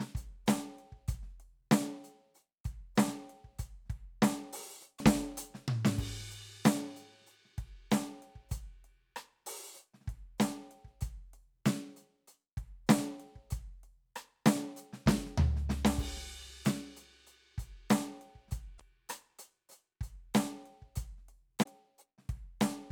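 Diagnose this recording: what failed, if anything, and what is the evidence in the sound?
The codec stage failed: there's damaged data in the compressed stream. Short glitches in the music at 4.95 to 5.01 s, 18.74 to 18.81 s and 21.59 to 21.66 s are the decoder choking on corrupted frames, losing sync, then locking back onto a clean frame header.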